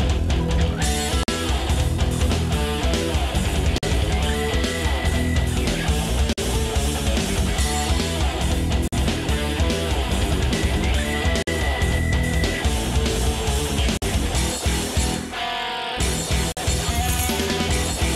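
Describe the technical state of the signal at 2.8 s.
At 2.8 s the signal is intact, with no audible dropout, distortion, glitch or other technical fault.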